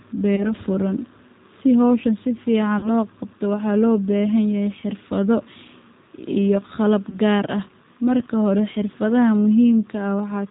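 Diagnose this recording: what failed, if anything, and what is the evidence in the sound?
G.729 codec throughout, codec stage: speech is cut off above 4 kHz and sounds rough and synthetic, consistent with an 8 kbit/s model rebuilding speech from a vocal tract filter, a pitch predictor and sparse pulses.

VoIP packet loss concealed by the speech codec, network stage, at 0.36–0.52 s, 2.79–2.89 s and 7.10–7.18 s. Gaps of about 20, 40 and 20 ms were filled by extending the last pitch and filter into a fading buzzy tone or coloured noise, with weak audio lingering afterwards.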